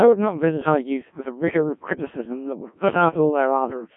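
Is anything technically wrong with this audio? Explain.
Yes. Throughout the speech the voice sounds robotic and buzzy, with a synthetic quality, and there is no content above about 3.5 kHz. The band runs from roughly 150 Hz to 3.4 kHz. This is the Codec 2 vocoder. Instead of keeping the waveform, it transmits only pitch, voicing, energy and a spectral envelope, and the decoder rebuilds the voice from sine waves. The heavy damage points to a very low rate, consistent with about 1.3 kbit/s.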